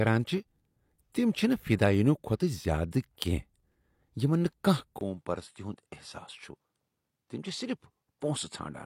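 At 4.99 s a 20 ms waveform gap, then duller speech about 5 dB lower, blank spectrogram above 11.4 kHz: likely input switched to a poorer device.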